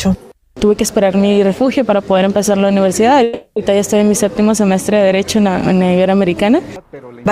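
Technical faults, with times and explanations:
3.23–3.58 s, call audio freeze: the sound stretches into a fading buzz for about 330 ms, likely from late packets emptying the jitter buffer, then resumes intact.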